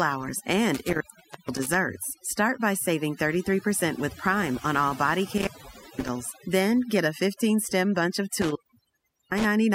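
Throughout, overdone noise removal cuts frequency bands near the estimated noise floor too deeply, taking quiet speech detail with them: near-silent, twinkling background.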